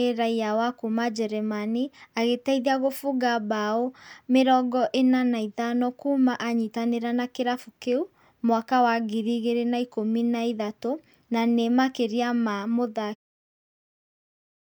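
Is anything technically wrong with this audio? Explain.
No, nothing technically wrong turns up here; the speech just eases out with a smooth fade that begins around 13 s and is finished by 13.16 s, the way an editor would close it.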